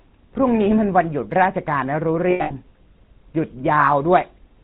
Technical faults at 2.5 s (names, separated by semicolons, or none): GSM full-rate codec; lost GSM frames